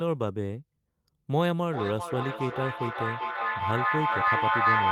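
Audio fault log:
1.68–4.91 s feedback echo between two devices: the speech returns roughly every 0.4 s, thinner and ringing, building to about 4 dB above the speech rather than dying away.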